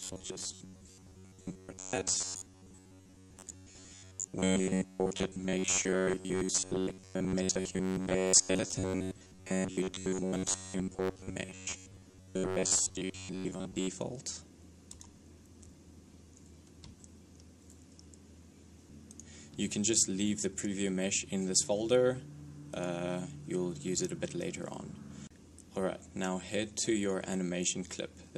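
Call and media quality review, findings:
Robotic sound from repeated short buffers, 0.01 to 13.9 s: rigid metallic buzz at 93.8 Hz, likely from late-arriving audio, with most of the sound replaced by repeated 10.7 ms slices.

Compressed frames skipped, 23.97 s: decoder jumping ahead about 20 ms, which fits one dropped 23.2 ms frame.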